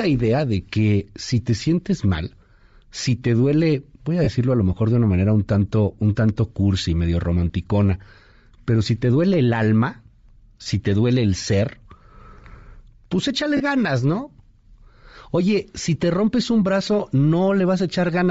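Bluetooth LC3 compression runs through the whole speech clip, and the damage is plainly audible. The upper spectrum sounds thinned and replaced by hiss, giving consonants and vowel edges a breathy, grainy texture. The likely cause is a low-bitrate LC3 encode, with the depth of the high-band loss pointing to roughly 32 kbps. The codec discards fine high-frequency detail and substitutes shaped noise in its place.

Lost LE Audio frames interrupt the speech three times: at 4.24 to 4.29 s, 10.63 to 10.66 s, and 13.57 to 13.61 s. Each gap spans about 30 ms, which fits three consecutive 10 ms frames going missing. The decoder covers each gap by replaying the previous spectrum with scrambled phase, so each one sounds like a short noisy smear instead of a clean dropout.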